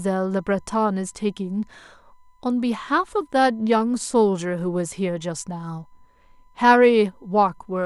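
USB whine runs throughout this speech clip: a steady 1 kHz tone, roughly 40 dB below the speech, from USB bus current drawn in 1 ms frames leaking through power or ground.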